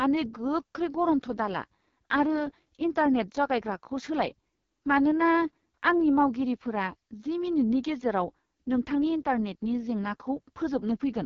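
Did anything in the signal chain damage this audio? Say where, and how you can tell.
Yes, the damage happened at the codec stage, and it lasts the whole clip. This is the AMR wideband (HD Voice) codec at a very low rate. The speech sounds rough and raspy from start to finish, which fits the 6.6 kbit/s mode. Nothing is present above 7 kHz. The band from 6.4 to 7 kHz is shaped noise rather than real speech detail. At this rate, the pulse-driven vocal tract model has too few bits to track the voice accurately.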